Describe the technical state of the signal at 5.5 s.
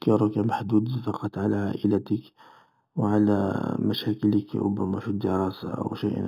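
At 5.5 s the speech carries imaging from linear upsampling, present throughout the clip. The sound points to audio raised from 8 kHz to 48 kHz by drawing straight lines between samples. That is a weak filter. The top of the band, just under 4 kHz, sounds dulled. A mirrored copy of the spectrum sits between 4 kHz and 8 kHz, roughly 30 dB below the signal. It adds a faint metallic shimmer to sibilants.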